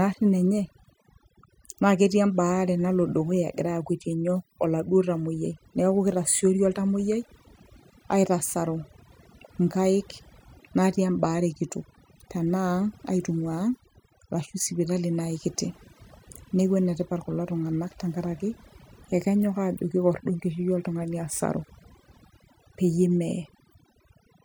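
Overdone noise removal runs throughout. Bands near the noise estimate are gated away, leaving near-silent gaps with twinkling specks.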